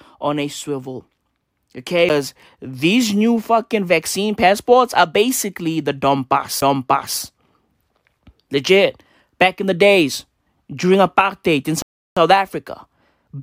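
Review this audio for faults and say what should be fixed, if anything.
A tick with a brief mute, about 10 ms at 2.09 s before "these new fucking vaccine" and about 15 ms at 6.61 s after "passports are basically the", marks a CD skip: the laser jumped tracks, so playback resumes elsewhere on the spiral. Re-rip the disc with an error-correcting ripper and clean or replace the damaged disc.

Silence from 11.82 to 12.17 s after "days during apartheid in" is a rebuffering stall: playback ran out of downloaded audio, paused, then resumed exactly where it stopped, adding 0.34 s. Buffer more audio ahead of playback, or capture from a local file rather than a stream.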